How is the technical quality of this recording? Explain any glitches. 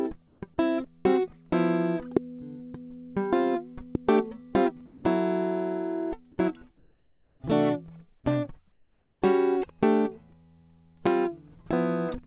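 The recording has several transmission glitches and three pops. The music comes through a call codec that leaves nothing above 4 kHz, consistent with G.711 mu-law at 64 kbps.

Comfort noise in place of the background, 0.28 to 0.42 s, 6.78 to 7.40 s and 8.72 to 9.22 s. The sender likely judged these quiet stretches, sitting about 40 to 46 dB below the loudest music, as silence and stopped transmitting. The receiver then generated synthetic noise instead. The real ambience turns into a flat, textureless hiss. In the first two stretches the level stays about the same, and in the third it is about 3 dB quieter.

Burst of packet loss, 1.00 to 1.19 s. A run of audio arrived too late or never arrived. The receiver stretched the last received sound over about 47 ms, and the level sinks as it is held. Around 40 ms of music is then simply gone, and about 8 ms more is cut where playback rejoins. The result is a brief smeared hold followed by a small jump forward.

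Sound dropped by the voice detector, 1.50 to 1.52 s and 4.86 to 5.04 s. The sender's activity detector likely mistook musical passages for background and stopped sending. Comfort noise filled the gap. The first dropout clips about 10 ms of sound. The second erases about 180 ms, so the music vanishes into steady noise and then returns abruptly.

Loud pop, 2.17 to 2.19 s, 3.95 to 3.97 s and 11.07 to 11.09 s. Each is a single sharp click, likely from a voltage spike such as a switch, static discharge or driver glitch. The first peaks roughly 20 dB above the music and the other two roughly 15 dB above it. The music continues underneath each pop.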